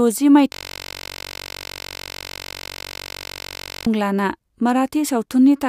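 At 0.52 s the speech stops dead and a system hang loop takes over until 3.87 s. The machine or its driver froze, but the sound hardware kept replaying the same ring buffer, so one 21.33 ms sliver of audio repeats back to back, well over a hundred times. Because the loop is so short, it fuses into a steady buzz at about 46.9 Hz rather than a stutter, which fits a 1024-sample buffer.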